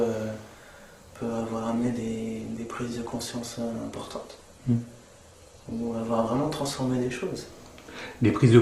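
From 1.2 to 7.2 s, an adaptive stream at a lower bitrate: nothing above 12.2 kHz, more codec artefacts, switching abruptly without any rebuffering gap.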